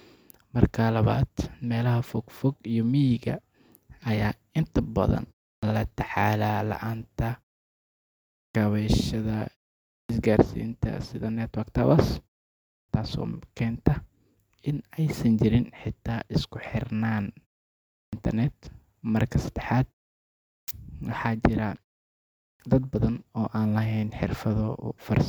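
At 5.58, 8.50, 10.05, 12.84, 18.08, 20.63 and 22.55 s, speech resumes with its opening cut away, a clipped start after a pause. Each follows a gap of between 0.33 and 1.15 s. The output path idles during the silence and needs roughly 45 to 50 ms to wake and lock again, so that much of each onset never reaches the listener and speech jumps in abruptly.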